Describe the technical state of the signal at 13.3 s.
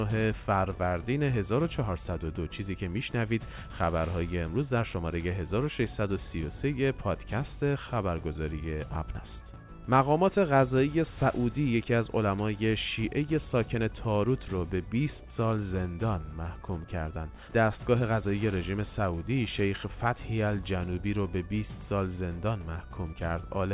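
At 13.3 s the audio is intact, with no fault present, only the narrowband character of the G.711 A-law call path, which leaves nothing above 4 kHz.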